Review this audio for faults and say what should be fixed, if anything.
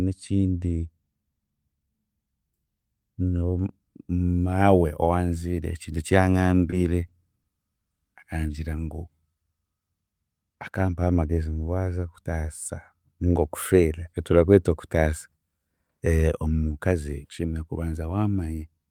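Three short stalls from late packets occur at 6.70–6.74 s (just after "ekintu eki"), 7.06–7.10 s and 7.42–7.46 s. Each holds the sound about 20 ms while the empty buffer waits, with nothing lost. A more adequate initial buffer depth would prevent them.

A jitter buffer slow-down runs from 8.37 to 9.06 s, where repeated pitch periods add 50 ms and the speech plays at 94% speed. Smoother, earlier target-delay adjustment would prevent it.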